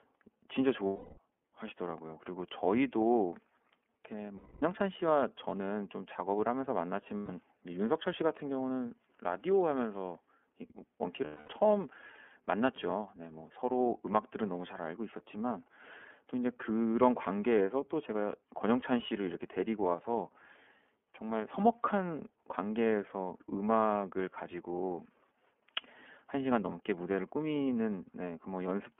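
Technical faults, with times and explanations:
Throughout, iLBC codec: the sound is confined to a narrow telephone band of roughly 250 Hz to 3.4 kHz, so it is thin and lacks sibilant air. iLBC codes each frame's excitation independently rather than predicting from earlier frames, and the plainly audible roughness and slightly synthetic grain are its trace. The coarseness fits the 13.33 kbps mode with 30 ms frames.
0.87–1.18 s, 4.37–4.62 s, 7.17–7.30 s and 11.25–11.49 s, lost iLBC frames: in each gap the speech turns into a held, faintly buzzy vowel lasting 0.31 s, 0.25 s, 0.13 s and 0.24 s respectively. The decoder fills missing packets by repeating the last pitch cycle blended with noise and fading it as the gap lengthens. Since every frame decodes on its own, the voice snaps back clean immediately afterwards.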